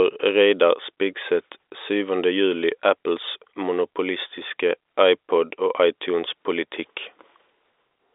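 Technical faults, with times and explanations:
No technical faults; the speech sits in the narrow band of a G.711 mu-law telephone line, roughly 300 Hz to 3.7 kHz with nothing above 3.8 kHz, which is how that coding path normally sounds.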